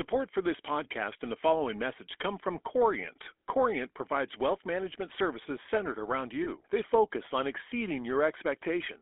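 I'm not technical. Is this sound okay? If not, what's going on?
No. The whole clip has the sound of the old GSM full-rate codec used on early mobile phones. It rebuilds the voice from a simplified buzzy pulse, so it comes out gravelly and rough, and the line keeps only roughly 300 Hz to 3.4 kHz, which makes it thin.

There's also a brief glitch from lost GSM frames, from 6.44 to 6.49 s. A tiny bit of signal went missing, fitting about one lost frame, and the phone filled the gap by repeating what came just before, so you hear a short metallic ring.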